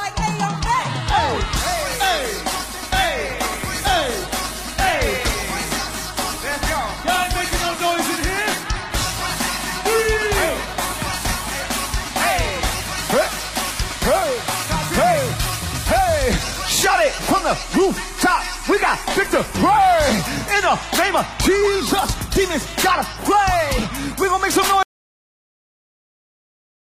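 At 24.83 s there's a cut-off end: the last buffers never got written, so the sound stops mid-stream and drops straight into digital silence, no decay.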